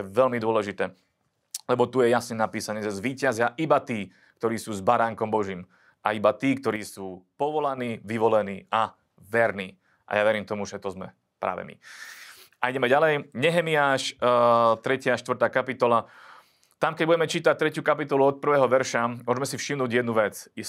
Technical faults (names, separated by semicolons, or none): sudden gain jump